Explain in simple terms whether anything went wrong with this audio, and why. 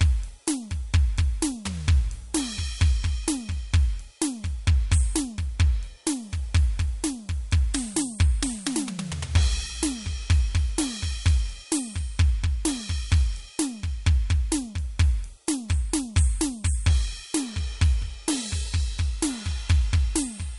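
MP3 compression, audible throughout the music, is the likely cause of the damage. The encoder removes everything above about 11.2 kHz, leaving the top end dull, and discards quieter detail, which makes the music sound watery and swirling with smeared attacks.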